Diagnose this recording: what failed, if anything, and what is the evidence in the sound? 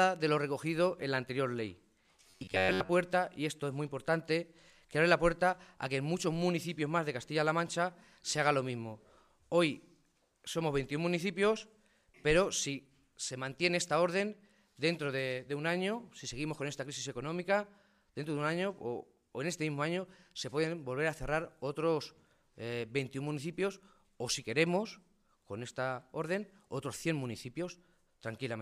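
Driver or buffer stage: robotic sound from repeated short buffers, 2.30–2.90 s; a fixed 93.8 Hz buzz, likely a 10.7 ms block looped over skipped audio.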